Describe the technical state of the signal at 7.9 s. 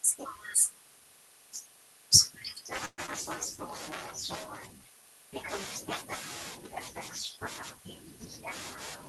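At 7.9 s the speech is intact, with no dropout, click, distortion or level jump, only the ordinary character of the call codec it has passed through.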